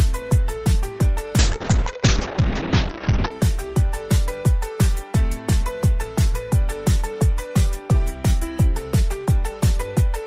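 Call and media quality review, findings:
Call bitrate drop, 1.39–3.37 s. Sound turns muffled and rough, band capped near 6 kHz. Encoder starved of bits, consistent with roughly 32 falling to 8 kbps.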